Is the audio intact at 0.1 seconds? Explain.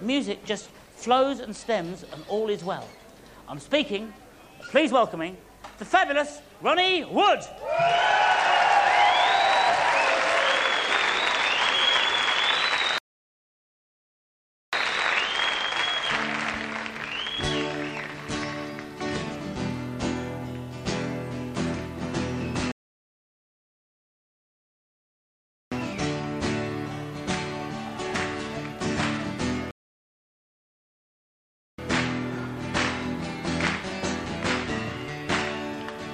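Yes, at 0.1 seconds the audio is intact, with no dropout, distortion or other fault to be heard at that moment.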